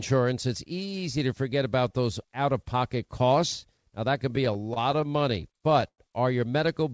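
A speech clip in which, from 4.36 s to 6.00 s, just after "that can", packets arrive late and the jitter buffer keeps running dry, causing repeated stalls (stutter). Sixteen times the receiver stretches the last sound to cover the wait, the longest about 102 ms, so 264 ms of filler makes up 16% of that span. No audio is lost, but the speech drags and stutters, through a call path with nothing above 8 kHz.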